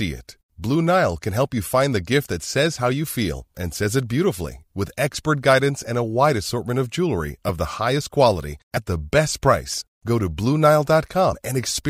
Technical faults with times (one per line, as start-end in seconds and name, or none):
8.76 compressed frames skipped
9.80-9.82 compressed frames skipped
11.31-11.36 compressed frames skipped